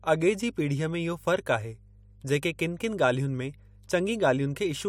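Speech with mains hum throughout: a steady 50 Hz tone sitting roughly 25 dB below the voice, pointing to a ground loop or nearby transformer.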